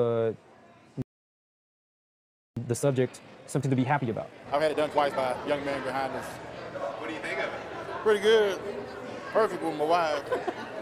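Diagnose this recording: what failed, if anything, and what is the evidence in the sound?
Playback stage: a playback stall silences the sound from 1.02 to 2.57 s, about 1.55 s, likely from a starved buffer or blocked player thread, not brief packet-loss dropouts.

Time-compressed catch-up follows from 2.57 to 5.57 s. The sound runs 1.5 times fast at unchanged pitch, unlike a sample-rate mismatch, which would raise the pitch too.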